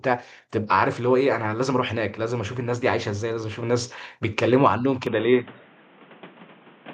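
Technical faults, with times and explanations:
5.07 s to the end at 6.94 s, input switched to a poorer device: the speech abruptly turns dull and boxy, with nothing above 3.8 kHz, a level shift of about 5 dB and a different background hiss roughly 30 dB under the voice. The likely cause is the recording moving to another microphone or a headset's call profile. Unlike a simple filter or codec bandwidth drop, the tone, level and noise floor all change together, with no silent gap at the switch.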